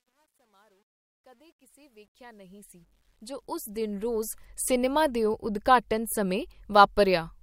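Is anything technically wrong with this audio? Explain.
Yes. From 0.0 to 4.46 s the fade-in shows truncation distortion on a fade. The gain stage appears to keep only about 11 bits with no dither, so low levels collapse into coarse square steps. The sound is gritty, worst from 0.0 to 2.82 s.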